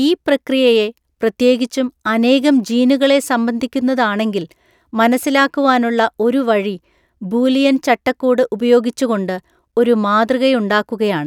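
No technical faults can be heard anywhere in the recorded speech.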